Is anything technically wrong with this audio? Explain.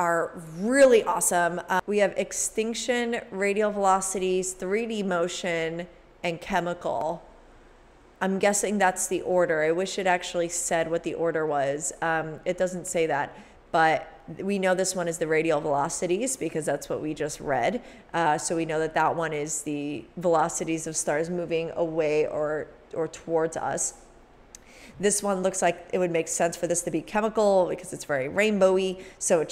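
No, nothing technically wrong turned up on listening, so there is nothing to flag.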